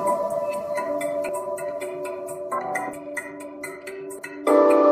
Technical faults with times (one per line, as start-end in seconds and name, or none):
1.28 compressed frames skipped
2.93 compressed frames skipped
4.18 compressed frames skipped